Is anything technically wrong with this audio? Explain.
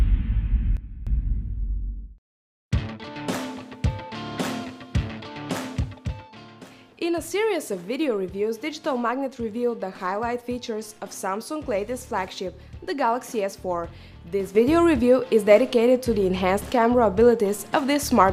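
Yes. A sudden gain jump at 0.77 to 1.07 s drops sound and background noise together by about 12 dB, then at 14.55 s raises both by about 8 dB until the end, likely from a gain setting applied with no ramp.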